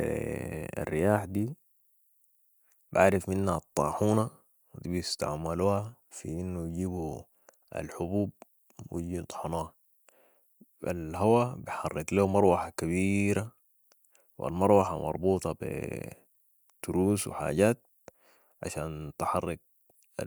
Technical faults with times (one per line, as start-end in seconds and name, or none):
none